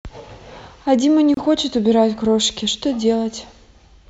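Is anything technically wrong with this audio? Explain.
Yes. At 1.34 to 1.37 s the speech drops out for about 28 ms, a short silence with edges smeared by the codec before the sound resumes where it stopped. This is a gap at a join of encoded pieces. The audio was encoded as separate segments, apparently every 6 s, and spliced without trimming, so the encoder's start-up delay and the padding of the previous segment's final frame remain as silence at the seam.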